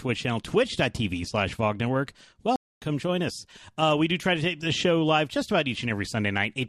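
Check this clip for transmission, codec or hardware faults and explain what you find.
One transmission fault is audible: a stream reconnect from 2.56 to 2.82 s. The connection dropped, the player fell silent while it re-established the link, then started a new decoder partway through the live stream instead of picking up where it left off. You hear a gap of about 0.25 s, and when the sound returns it has jumped ahead by roughly a third of a second, so that stretch of audio is skipped.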